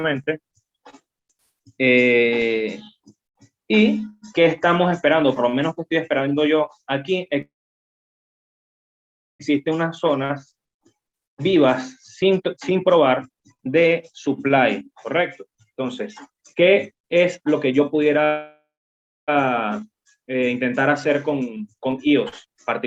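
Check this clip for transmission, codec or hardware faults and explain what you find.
Two kinds of network fault appear: two call audio freezes, each followed later by jitter buffer speed-up.

Call audio freeze, 7.41 to 9.41 s and 18.25 to 19.30 s. Packets were likely held up in transit, so the jitter buffer ran dry and the receiver had nothing new to play. It stretched the last sound into a brief fading buzz, then silence: about 1.9 s of it in the first freeze and 0.62 s in the second. The audio then resumes exactly where it stopped, adding 2.0 s and 1.03 s of delay without losing anything.

Jitter buffer speed-up, 9.49 to 11.63 s, 12.22 to 18.18 s, and 20.35 to 22.56 s. The buffer held more audio than it aims for, likely after delayed packets arrived together. To drain that backlog, the receiver repeatedly cut out tiny pitch-period-sized slices. Pitch stays the same but the sound plays faster: about 115%, then 123%, then 121%. 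It sounds noticeably rushed, especially through the long middle stretch, which sheds roughly one and a half seconds.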